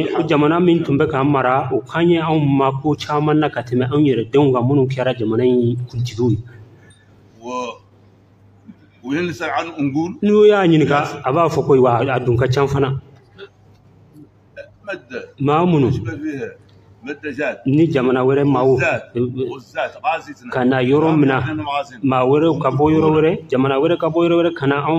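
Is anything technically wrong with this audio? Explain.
No, nothing in the audio points to a technical fault.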